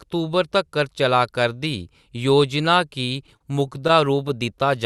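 From 3.07 s to 4.30 s the speech shows repeated stalls (stutter): eleven brief holds, the longest 37 ms, adding up to 125 ms and about a tenth of that stretch. Packets were arriving late or more slowly than playback consumed them, so the jitter buffer kept running dry, and the receiver stretched the last sound each time until it could continue. Nothing is lost, but the passage drags with a halting, catching rhythm, heard through a call path whose top end stops around 12 kHz, which fits Opus.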